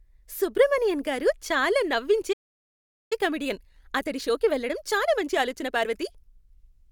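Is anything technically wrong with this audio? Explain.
Yes, there are two related faults.

A playback stall runs from 2.32 to 3.13 s, right after "సుబ్రమణియన్ గారు చాలా నవ్వించే". The speech cuts out mid-flow into silence for about 0.78 s, likely because the player ran short of buffered data or its output thread was held up, before the speech resumes.

A time-compressed catch-up follows from 3.13 to 6.13 s. To recover the lost time, the player trims small slices and cross-fades across them, running about 1.25 times normal speed. The speech sounds rushed but keeps its pitch.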